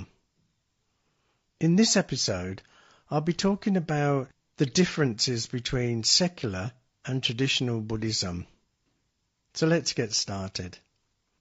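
From start to finish the speech sounds rough and grainy, with noise between harmonics, most likely low-delay AAC compression (AAC-ELD) coded at roughly 32 kbps.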